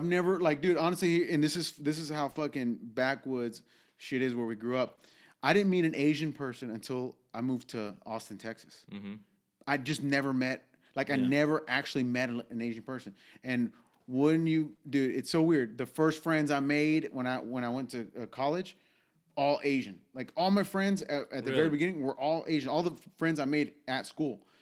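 At 2.31 to 2.37 s, 4.95 to 4.99 s and 14.75 to 14.79 s, the speech shows short concealed packet loss. Between 20 and 40 ms of audio never arrived in time. The decoder extended the last sound to cover it. Each spot is a brief smear or wobble.

Lost packets rebuilt from error correction sit at 2.35, 4.87, 4.99, 7.87, 9.87, 14.71, 20.97 and 22.77 s. These rebuilt stretches last between 20 and 120 ms. The packet that followed each loss carried a low-bitrate copy, which the decoder played. Those moments sound rougher and noisier.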